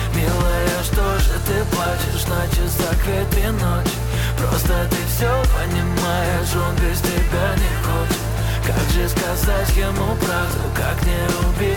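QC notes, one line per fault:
No technical faults detected.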